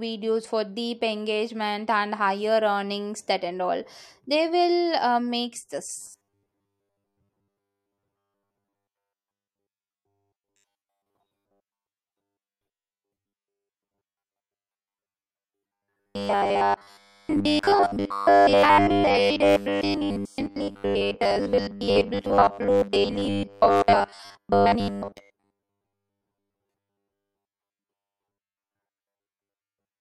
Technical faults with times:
6.00-30.00 robotic sound from repeated short buffers

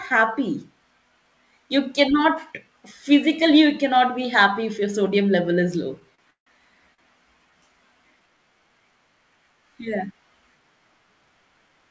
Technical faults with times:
6.15-6.20 short stall from a late packet
6.30-6.48 call audio freeze
6.94-7.00 short stall from a late packet

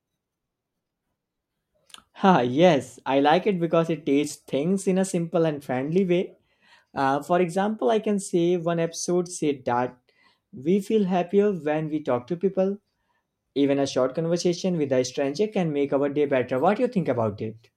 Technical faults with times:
none

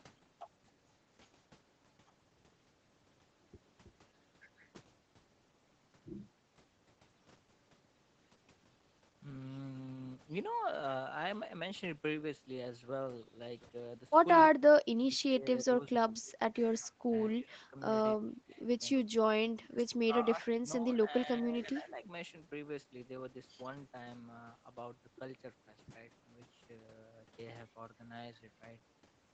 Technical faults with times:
14.51-15.58 speech suppressed in double talk
15.99-16.39 speech suppressed in double talk
16.71-17.12 speech suppressed in double talk
17.37-17.76 speech suppressed in double talk
18.26-18.61 speech suppressed in double talk
19.55-19.87 speech suppressed in double talk
20.33-22.04 speech suppressed in double talk

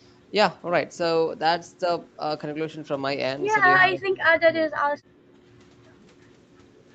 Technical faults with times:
3.82-4.76 speech suppressed in double talk
5.08-5.20 background gated by the echo canceller

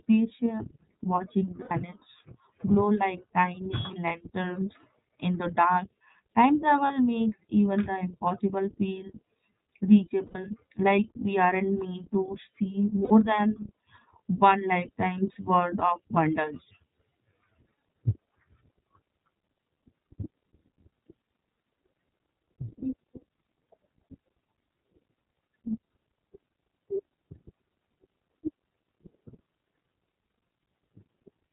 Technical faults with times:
0.00-31.52 iLBC codec
1.61-1.71 lost iLBC frames
6.87-6.91 lost iLBC frames
10.26-10.36 lost iLBC frames
13.04-13.12 lost iLBC frames
15.33-15.36 lost iLBC frames

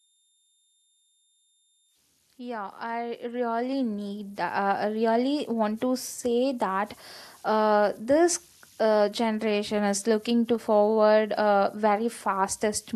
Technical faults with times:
0.00-12.96 converter idle tones
2.36-5.89 automatic gain rising

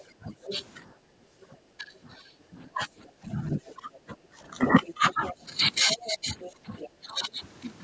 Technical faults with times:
0.00-0.64 other side's voice leaking through
0.18-7.40 speech suppressed in double talk
3.05-6.89 other side's voice leaking through
4.21-4.36 background gated by the echo canceller
6.57-6.64 background gated by the echo canceller

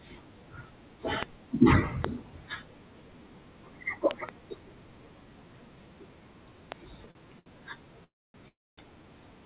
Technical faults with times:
1.23-1.25 loud pop
2.04-2.06 loud pop
4.11-4.31 loud pop
6.72-6.74 loud pop
7.11-7.48 short stall from a late packet
8.04-8.79 call audio freeze

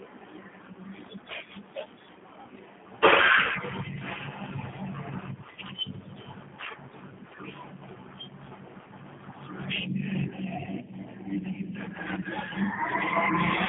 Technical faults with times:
0.00-13.68 G.729 codec

